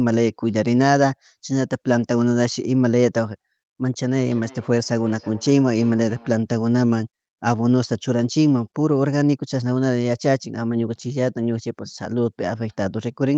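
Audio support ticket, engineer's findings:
Feedback echo between two devices, 4.13–6.45 s. Repeats roughly every third of a second, about 23 dB down. A nearby device's playback re-enters this mic, uncancelled.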